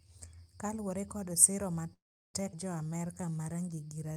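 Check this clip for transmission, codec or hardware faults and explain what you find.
Three faults from the call's network path can be heard in this speech, starting just before the midpoint.

From 1.93 to 2.36 s, right after "kaluwore kod siro", there is a call audio freeze. The sound stops and a gap of about 0.4 s is inserted, roughly 0.37 s of it silent. When playback resumes, nothing is missing; the rest of the audio simply arrives later. The likely cause is delayed packets draining the jitter buffer. Because the audio picks up exactly where it left off, this is a pause rather than a loss.

At 2.52 to 2.55 s there is a skip ahead. Roughly a fifth of a second of audio was discarded, and the two sides are spliced with only a few milliseconds of fill. Where the freeze stretched time, this cuts it. The result is an abrupt jump forward with no audible hole.

From 2.87 to 4.13 s the jitter buffer slow-down runs at about 86% speed, adding 182 ms in total. 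The receiver repeats individual pitch periods to rebuild its reserve, so syllables drag and may warble slightly. The pitch stays the same, which distinguishes this from resampling or a clock mismatch.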